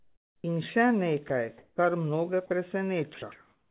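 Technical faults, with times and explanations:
0.00–0.44 s, comfort noise in place of the background: the real room tone becomes flat, featureless hiss about 4 dB quieter, likely because the sender's voice detector stopped transmitting during the pause.
1.28–1.30 s, sound dropped by the voice detector: 20 ms of sound, just before "kar mnoge", gives way to steady noise, likely because the detector mistook it for background.
1.58–1.78 s, comfort noise in place of the background: another pause filled with smooth synthetic noise, about 5 dB quieter than the real background, just before "kar mnoge", likely from discontinuous transmission.
1.74–1.78 s, onset clipped by the voice detector: "kar mnoge" starts abruptly, losing its first 40 ms and soft start, likely because the detector was slow to reopen.
2.46–2.50 s and 3.14–3.22 s, sound dropped by the voice detector: 40 ms and then 80 ms of sound are swapped for steady noise, likely because the detector took them for background and stopped sending.
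3.32–3.71 s, comfort noise in place of the background: the tail's background, about 40 dB below the loud parts, turns into uniform hiss about 3 dB louder than before, likely synthetic fill after transmission paused.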